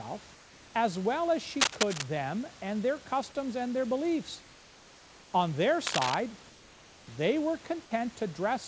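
It's a speech recording that came through a call path, and you can hear the top end stop around 8 kHz, which points to a wideband call codec. In the pauses at 0.35–0.74 s, 4.43–5.33 s and 6.50–7.07 s, the room background is replaced by comfort noise, a steady, featureless hiss about 2 dB quieter than the real room sound. That's likely discontinuous transmission, with the receiver filling the gaps in with synthetic noise. At 1.60–2.04 s and 5.87–6.14 s there's cable scratch noise, rough, uneven rustling bursts that sit around the speech level or a bit above it, likely from a worn cable or connector being moved.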